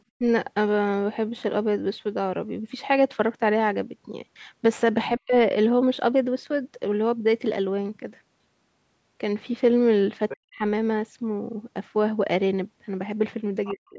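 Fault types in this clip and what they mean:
Speech suppressed in double talk: the talker's level plunges, by about 15 dB near the start and by roughly 40 dB later, likely echo-canceller ducking; unlike dropouts, dips follow the other side's speech.
Other side's voice leaking through: brief faint scraps of a second voice sit well under the talker just before three dips, likely residual loudspeaker echo, adding sound rather than removing it.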